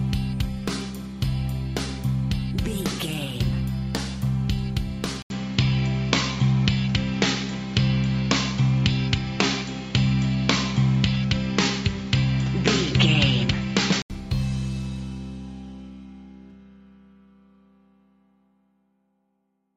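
At 5.22 s the sound goes dull and boxy after a gap of 80 ms. Nothing remains above 7.6 kHz. The level shifts by a few decibels. A new noise floor sits roughly 30 dB down. The input was likely switched to a poorer device. Full bandwidth returns at 14.10 s.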